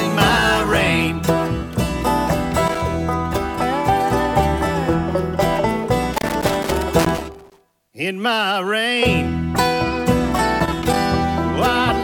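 Loose connector crackle breaks out at 2.67–2.81 s, 6.14–7.92 s and 10.59–10.96 s, as a worn contact makes and breaks, chopping the signal into scratchy pops. Its irregular, gritty bursts set it apart from evenly spaced digital clicks.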